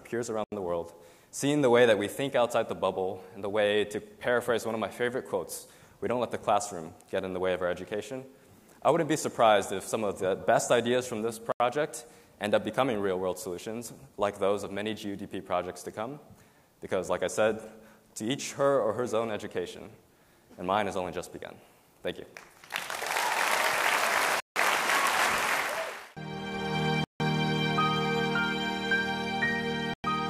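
Blocks of digital silence cut the sound at 0.44 s (80 ms), 11.52 s (80 ms), 24.4 s (160 ms), 27.04 s (160 ms) and 29.94 s (104 ms). In each, zeros replace the audio, either because the output buffer went unfilled in time or because a calculation produced invalid values. Unlike a fade or a level dip, each hole starts and ends abruptly, with no taper.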